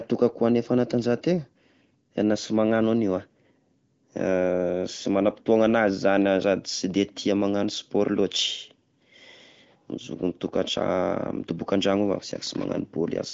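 Nothing stood out on listening to this speech recording, which has the band-limited sound of an AMR wideband (HD Voice) call path at 18.25 kbit/s, with no content above about 7.4 kHz.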